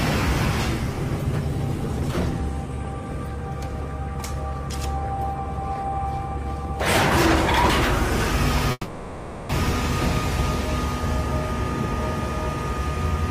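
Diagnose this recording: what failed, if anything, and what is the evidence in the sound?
A call audio freeze, most likely at the network stage, runs from 8.71 to 9.51 s. The last sound is stretched into a fading buzz for about 780 ms, ending in roughly 20 ms of silence. The audio then resumes where it stopped, with nothing lost, arriving 780 ms later.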